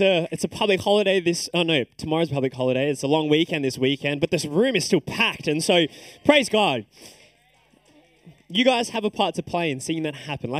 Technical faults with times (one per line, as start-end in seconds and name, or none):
0.00-10.59 channel delay (comb filtering)